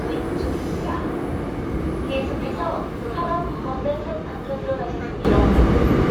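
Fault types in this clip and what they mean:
Sudden gain jump: at 5.25 s the sound and its background noise step up together by about 12 dB and stay there to the end, likely a gain change applied without a ramp. The waveform widens abruptly, and the spectrogram brightens across all frequencies at one vertical edge.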